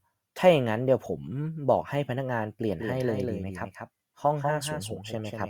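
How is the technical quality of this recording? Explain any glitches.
There are two problems, one running the whole way through and one arriving partway.

Throughout the speech there's sample clock jitter: the converter's clock wobbles by roughly a microsecond and a half, so samples land slightly off time. The error, sitting around 40 dB under the signal, shows up as a faint hiss or grit that swells on loud, bright sounds and drops away in pauses.

From 2.70 s to the end you get a doubled audio track: a second full-band copy trails the original by roughly a fifth of a second, a few dB quieter. It kicks in abruptly with no room tail, so it's likely a second, slower capture path mixed back in.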